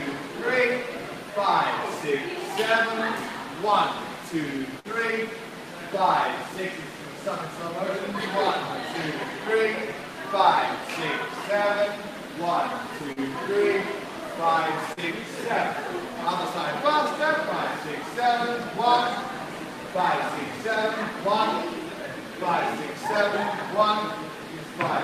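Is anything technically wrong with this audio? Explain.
Yes, there are three packet-loss events.

A burst of packet loss at 4.79 to 4.87 s drops consecutive packets. The receiver holds the last sound for about 49 ms while fading it, producing a brief held, dying tail, and the audio resumes with roughly 40 ms skipped.

Short concealed packet loss at 13.12 to 13.19 s and 14.92 to 15.00 s: each time, about 40 ms arrives too late, and the decoder synthesises roughly 42 and 45 ms of continuation before blending back. Each sounds like a quick smear or wobble.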